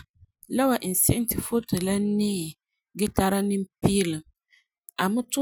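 Recorded speech, with no technical fault audible anywhere in it. Nothing in the sound points to a problem in how it was captured, processed or delivered.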